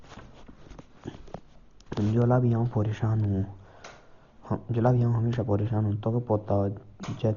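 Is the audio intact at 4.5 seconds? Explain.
No. At 4.5 seconds, as throughout, the speech sounds dull with rough, fluttering noise, nothing above 6.9 kHz, likely heavy Dolby Digital compression at a starved bitrate near 32 kbps.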